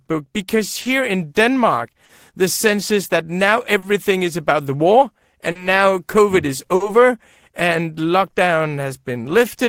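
Clock drift between sender and receiver runs through the whole recording: the sending clock is about 3% slower than the receiving one, so the jitter buffer keeps draining and the receiver must stretch the speech to avoid running empty, giving small, irregular timing hiccups.

Repeated timing corrections occur from 7.69 to 9.40 s, where playback slows to 97% speed. The receiver repeats short fragments to cover the slow sender, adding around 70 ms in total.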